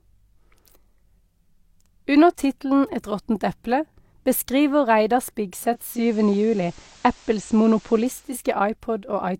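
At 5.69 s the speech blends over roughly half a second (460 ms), while a faint hiss, around 30 dB below the speech, rises and the level shifts by about 4 dB. At 8.43 s it returns to the digital sound. This is digital radio blending to analogue: the receiver lost the digital stream and cross-faded to the station's FM broadcast, with its narrower bandwidth and background noise, then blended back.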